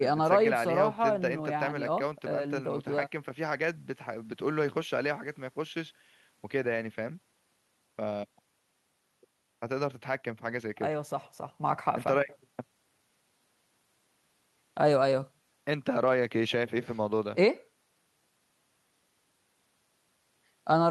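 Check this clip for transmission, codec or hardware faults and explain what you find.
No faults turn up anywhere in this speech recording. Nothing in it points to a problem anywhere along the chain.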